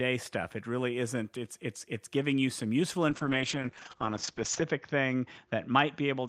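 A call bitrate drop hits this speech recording from 3.11 s, right after "giving you some useful", to the end. The encoder appears to fall from around 32 kbps to about 8 kbps, coding more coarsely and cutting the bandwidth from 20 kHz to 8 kHz, so the voice turns muffled and rough, worst for about 1.5 s.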